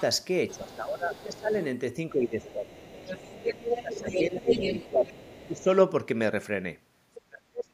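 From 0.48 to 1.65 s, the other side's voice leaks through faintly, about 25 dB below the speech. The echo canceller likely left loudspeaker sound in the microphone. From 0.51 to 1.53 s, speech is suppressed in double talk. The talker dips by about 15 dB, likely because the canceller turned both voices down together. From 2.12 to 4.51 s it dips again, by about 15 dB. From 2.44 to 5.64 s, the leak is strong, only about 5 dB under the speech. From 4.88 to 5.68 s, speech drops about 15 dB once more. From 7.14 to 7.22 s, a brief scrap leaks through, about 20 dB down. From 7.27 s to the end, speech falls about 35 dB and nearly vanishes.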